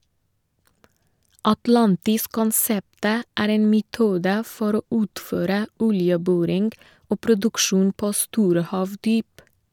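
No technical faults are audible.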